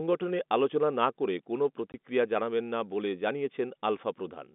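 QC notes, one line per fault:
1.92–1.94 s, packet loss filled with silence: a 20 ms hole of pure silence cuts into the narrowband telephone speech, with abrupt edges. Its length suggests one lost packet. Unlike concealment, nothing is synthesised to bridge the gap.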